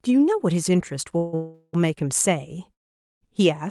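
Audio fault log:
1.17 to 1.75 s and 2.73 to 3.23 s, call audio freeze: The sound stalls three times, for 0.15 s, 0.38 s and 0.48 s. The first two run back to back. In them the last sound is stretched into a fading buzz. The third drops almost at once to about 0.47 s of silence. Each time the audio resumes where it stopped, so nothing is lost, only delayed. A jitter buffer running empty is the likely cause.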